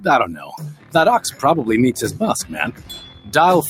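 Throughout, the sound pumps and thins, with level swinging by around 15 dB: a speech-tuned noise suppressor applied to music or sounds is treating steady tones and tails as noise. Held or fading sound sinks from 0.32 to 0.95 s (about 13 dB), 1.27 to 1.43 s (about 10 dB) and 2.72 to 3.33 s (about 12 dB), where the noise suppressor cut the sound harder than its surroundings.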